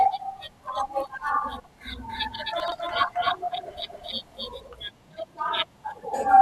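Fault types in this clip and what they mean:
Chunks out of order: At 1.6 s a 40 ms piece of speech plays one slot late, and from 2.6 to 2.72 s another 40 ms piece plays two slots late, so each spot sounds briefly jumbled, with hard joins where the order breaks. Unlike a dropout, nothing goes missing, and unlike a stutter, nothing repeats. The same sound is simply heard in the wrong order.
Doubled audio track: From 2.09 to 4.67 s a second full-band copy of the speech runs around a third of a second behind, about 5 dB quieter. It is likely a second capture through a slower path, or an edit holding two out-of-step copies. Unlike an echo or reverb, the copy has no decay and no room colour, and it starts and stops abruptly rather than fading.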